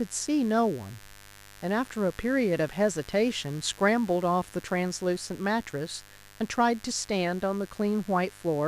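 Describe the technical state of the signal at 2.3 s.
At 2.3 s the speech sits on top of a mains buzz that runs through the whole clip. Sharp switching spikes, twice per 50 Hz cycle, leak into the signal path and produce a steady, raspy buzz, roughly 25 dB below the speech. On a spectrogram it shows as evenly spaced horizontal lines at multiples of 50 Hz climbing into the kilohertz range. The waveform shows a regular 100 Hz comb of narrow spikes in pauses.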